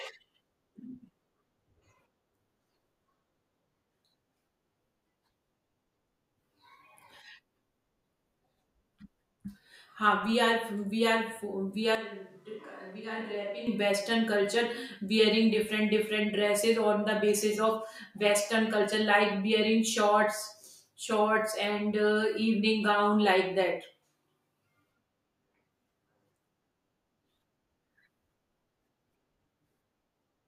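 From 11.95 to 13.67 s the speech abruptly turns hollow and roomy, about 10 dB quieter and thinner, likely a switch to a distant microphone.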